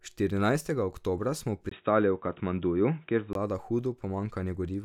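At 1.69 s the speech drops out for about 20 ms, then comes back dull and boxy, with nothing above roughly 3.8 kHz, a level shift of around 5 dB, and a faint new noise floor sitting well below it. At 3.35 s the full brightness returns. That's the signature of an input switched to a poorer device: the system likely jumped to a narrower-band microphone or a headset's call profile for that stretch, then switched back.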